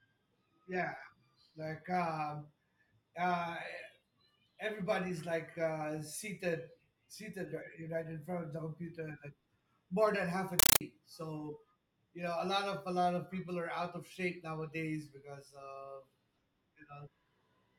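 At 10.59 s, right after "more than half a", the speech is replaced by harsh, very loud static until 10.81 s, where "so you know" resumes. This is a compressed stream played as audio. A Dolby Digital stream reached the output as if it were plain samples and was never decoded. Each data frame sounds as a burst of noise about 9.3 ms long, followed by silence. The bursts repeat 31.25 times a second, giving a rapid chattering buzz. The density fits a 448 kbps stream.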